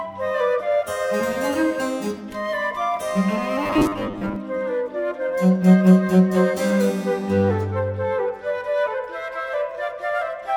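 Robotic sound from repeated short buffers runs from 3.63 to 4.36 s: a rigid, metallic buzz at 100 Hz that follows the original only roughly. This is likely due to fresh audio arriving too slowly, so a 10 ms slice is looped to fill gaps, with about half the material repeated rather than played.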